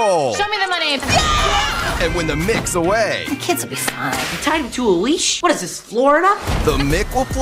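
Nothing goes wrong here: the sound runs along steadily the whole way, with no glitches, gaps or odd artefacts anywhere.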